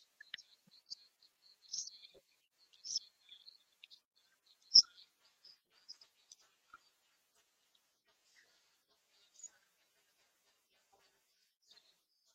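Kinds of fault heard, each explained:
Filter restarted on every block: the filter forgets its state at each block boundary and starts again from silence, so every block opens with a tiny transient. Here that makes a steady 345 Hz buzz under the speech, rising and falling with its level, which fits a 128-sample block.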